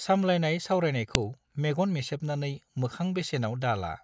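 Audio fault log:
1.15 s, file header played as audio: a sharp, loud click where a joined piece begins, its leftover header bytes played back as a brief burst of samples.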